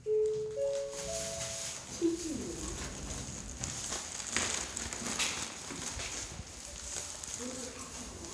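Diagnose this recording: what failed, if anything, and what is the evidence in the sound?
Nothing in the recording points to a failure at any stage of the chain. The sounds come through without any dropout, distortion, noise or other disturbance.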